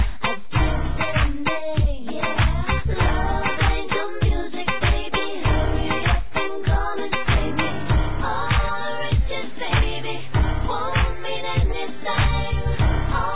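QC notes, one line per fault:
No fault was found, so there is no line per fault to note.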